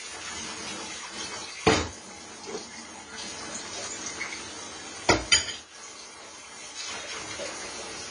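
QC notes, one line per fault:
Throughout, AAC compression: likely low-bitrate AAC-LC coding, pointing to about 24 kbps, removes everything above 10 kHz, leaving the sound dull with plainly audible coding damage.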